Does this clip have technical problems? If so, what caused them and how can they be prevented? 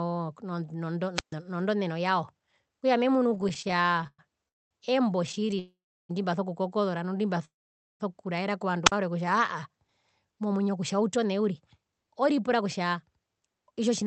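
Yes. Several faults can be heard.

Wireless microphone squelch dropout occurs at 1.15 to 1.34 s and again at 8.85 to 8.92 s. The radio link from the FM microphone faded. The receiver's squelch then muted the output. The result is a hole of near silence, about 136 ms in the first event and about 47 ms in the second. Then the sound returns. To prevent it, keep the transmitter in clear line of sight, use diversity receivers and choose a clean frequency.

Repeated stalls (stutter) occur at 3.27 to 4.20 s and at 5.27 to 5.59 s. Packets kept arriving late, so the jitter buffer ran dry again and again. The receiver bridged each gap by extending the last sound. The first stretch has about twenty stalls, with 324 ms filled in and the longest stall at 114 ms. About a third of that span is concealment. The second stretch has nine shorter stalls, totalling 84 ms. Nothing is lost, but the sound drags and judders. 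To prevent it, give the call a stable network path with enough spare capacity.

A call audio freeze occurs at 4.48 to 4.73 s, at 5.59 to 6.11 s and at 7.45 to 8.02 s. The likely cause is packets held up in transit, which left the buffer empty. The last sound is stretched and then falls to silence. The fills last 223 ms, 501 ms and 550 ms, with about 220, 340 and 500 ms of silence. Playback then resumes where it stopped, so gaps are inserted. To prevent it, use wired connections and prioritise real-time traffic.

A jitter buffer speed-up runs from 9.88 s to 14.02 s. After the freezes, the buffer held too much audio. The receiver trimmed short pitch-period slices repeatedly to catch up, removing around 0.4 s in total. Playback runs at 109% speed with unchanged pitch, so it sounds hurried. To prevent it, remove the delay spikes that overfill the buffer.

The Opus call path limits the top end to 8 kHz. 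Its coding noise fits a bitrate around 32 kbps.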